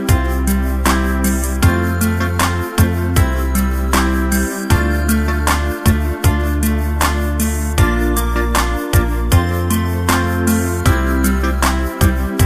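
No technical faults can be heard anywhere in the recording. Nothing in it calls for a timestamp or an explanation.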